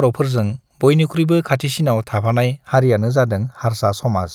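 Speech that turns hollow and phasey from 2.73 s to the end, its upper range dulled by fixed notches. This is channel delay (comb filtering): one channel trails the other by roughly 0.2 ms, so summing to mono cancels evenly spaced frequencies, the first near 3 kHz.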